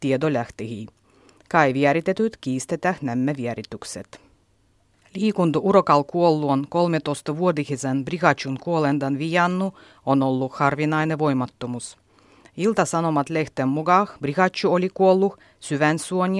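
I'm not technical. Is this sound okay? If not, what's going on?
Yes, this sound is okay; there's nothing going on with it that needs fixing.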